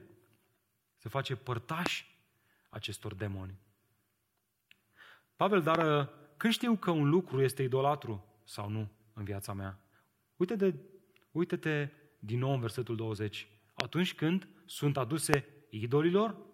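A loud pop strikes at 1.86–1.88 s, a double pop at 5.75–5.83 s just before "uh când știu că", and single pops at 13.80–13.82 s before "când sunt" and 15.34–15.36 s after "când sunt". Each peaks about 20 to 25 dB above the speech, which continues underneath rather than dropping out. These sharp thumps fit a voltage spike, likely from a switch or static.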